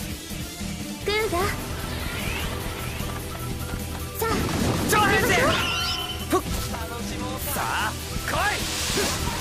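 From 2.12 s to 4.10 s the audio carries a doubled audio track: a second, full-band copy of the same sound runs roughly 0.7 s behind the original at around 5 dB lower. The copy has no decay or room colouring, and it cuts in and drops out abruptly at those boundaries, giving a clean, mechanical echo. The likely cause is the signal being captured twice, once through a slower path, or an edit leaving two offset copies.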